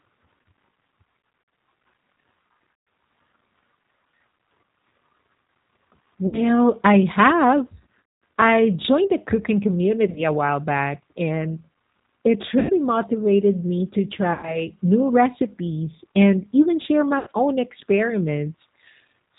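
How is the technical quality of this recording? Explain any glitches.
The quality is poor. The speech carries plainly audible low-bitrate codec colouring throughout, and it is broken by repeated dropouts.

The G.729 codec at 8 kbit/s is plainly audible for the whole clip. Speech is rebuilt from a pitch predictor, a vocal tract filter and sparse pulses, which gives it a rough, synthetic edge. On a spectrogram, nothing appears above 4 kHz.

VoIP packet loss concealed by the speech codec occurs at 1.2 to 1.6 s (scattered), 2.73 to 2.87 s, 6.27 to 6.42 s, 8.06 to 8.19 s, 10.10 to 10.21 s, and 12.59 to 12.72 s just before "motivated me to". It recurs at 14.33 to 14.62 s between "motivated me to" and "new recipes and even", and at 17.19 to 17.29 s after "recipes and even share". Each time, the decoder extends its last pitch and filter with decaying gain, which produces a buzzy tone or coloured noise that fades. 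On a waveform this shows as a shrinking envelope. On a spectrogram it shows as smeared, static energy.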